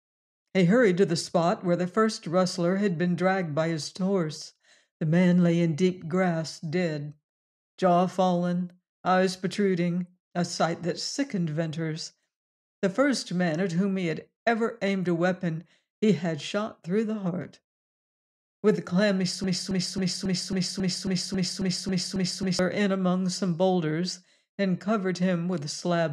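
At 19.44 s a stalled player or stream likely kept resending its last fragment, a broken-record loop repeating a 272 ms piece twelve times until 22.59 s.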